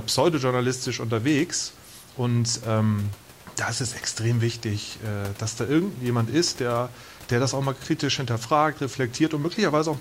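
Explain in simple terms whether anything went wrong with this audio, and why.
Nothing went wrong that could be heard when listening to this speech recording; the faint noise of the room in the background is just part of where it was recorded and well below the speaking.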